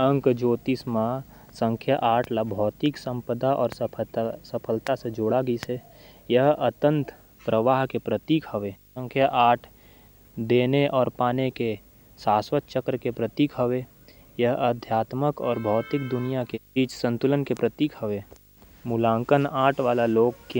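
Throughout the speech runs video or display buzz, well below the voice: a screen or video cable leaking into the audio path. A 50 Hz buzz with hash above it shows as stacked harmonic lines on a spectrogram, plus a thin steady line at 15.6 kHz.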